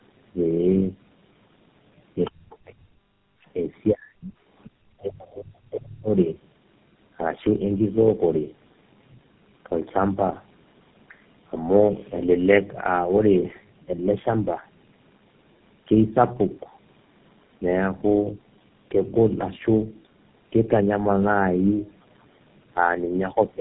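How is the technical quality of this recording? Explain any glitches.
The quality is poor throughout, because of tandem speech coding. The speech passed through about three narrowband codecs in a row, each re-encoding the last one's losses. The result is rough, muffled and warbly, with nothing above 3.8 kHz.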